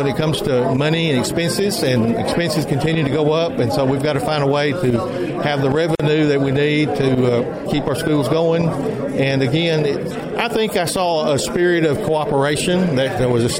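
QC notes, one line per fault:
5.95–6.00 s, gap at a join of encoded pieces: a 45 ms hole of silence opens in continuous sound. Separately encoded segments were joined with their start delay and last-frame padding left in. Unlike a dropout, nothing is skipped; the sound resumes exactly where it stopped, with smeared edges.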